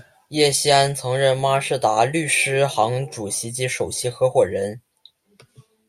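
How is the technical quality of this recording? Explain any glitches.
No technical glitches can be heard anywhere in the recording. The speech runs continuously, with nothing that interrupts or disturbs it.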